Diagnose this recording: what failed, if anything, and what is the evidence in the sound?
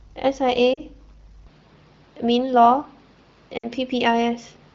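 Lost AMR speech frames, at 0.73 to 0.81 s and again at 3.58 to 3.67 s. This is a network-stage fault. Radio errors corrupted speech frames, and the AMR-WB decoder concealed them by repeating the last good pitch and vocal tract settings at falling gain. The first gap lasts about 40 ms, which fits two 20 ms frames, and drops to near silence. The second lasts about 60 ms, which fits three frames, and also drops to near silence before the speech recovers, briefly rough.

Input switched to a poorer device, from 1.47 s to the end. The stage is the driver or device routing. At 1.47 s the sound turns duller and boxier, with nothing above 5.8 kHz, well short of the wideband codec's normal top end. There is no gap at the changeover and the level stays about the same. A new noise floor appears, roughly 35 dB below the speech. This points to the system having likely moved its input to a narrower-band microphone or a headset's call profile partway through.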